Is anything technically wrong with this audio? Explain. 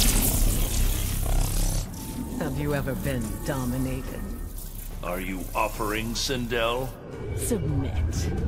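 Yes. From 5.06 to 5.52 s there's DAB burbling: weak reception let bit errors, at a fraction of a percent, slip past error correction into the MP2 data, so corrupted samples put short blips of noise in single sub-bands and corrupted scale factors make individual sub-bands jump in level, giving short blips and level jumps over the sound.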